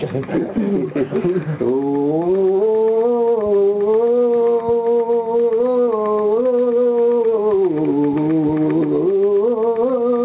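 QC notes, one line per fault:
Throughout, gain pumping: the gain swings by around 5 dB, squashing dynamics, likely from input gain set far too high with a fast limiter clamping down. The narrowband call path stops near 4 kHz.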